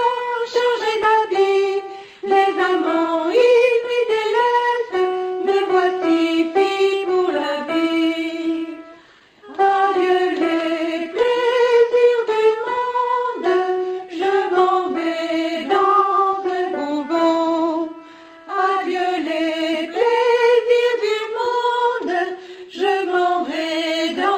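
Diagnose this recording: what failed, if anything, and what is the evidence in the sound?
Clock drift between sender and receiver sits at the network and buffer stage. The sender's clock runs about 2% slow against the receiver's, so the jitter buffer keeps draining instead of holding steady. On a waveform this shows as a timeline that slowly stretches relative to the source. On a spectrogram it appears as faint, unevenly spaced seams from start to finish, rather than one clean discontinuity.

The receiver answers that drift with repeated timing corrections from 0.02 s to 24.3 s. It inserts short repeated slices to refill the buffer, all in the same direction, for a net playback rate near 98% and roughly 400 ms of added material overall. By ear these are at most slight hiccups and a faintly unsteady tempo. A waveform shows small duplicated stretches at irregular intervals. The spectrogram shows brief smeared or doubled frames at each splice.

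Scattered short gaps come from packet loss or lateness on the network, concealed by the receiver. Between 8.68 s and 12.79 s there are about five holes, the longest around 10 ms. Between 15.31 s and 17.89 s there are about four, the longest around 7 ms. Each was patched by extending the last sound, which leaves tiny ticks or smears. On a spectrogram these are thin vertical stripes where harmonics freeze briefly.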